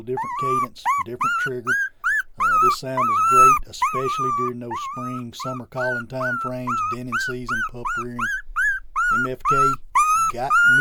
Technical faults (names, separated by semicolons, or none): none